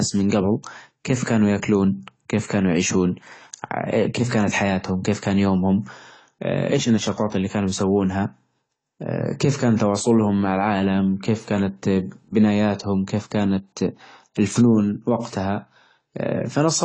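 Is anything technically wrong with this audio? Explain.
Yes, there are two faults. Throughout, the speech is dull and smeared with nothing above 9.9 kHz and a plainly audible fizzy texture, likely AAC compression at a low bitrate around 24 kbps. At 9.77 to 9.80 s, pre-echo appears: quantisation noise spread across the transform block fills the 27 ms before a sharp attack with brief hiss, softening its onset.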